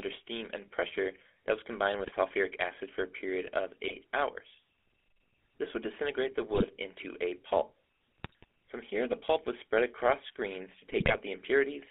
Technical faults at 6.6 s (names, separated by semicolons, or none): GSM full-rate codec; GSM bit errors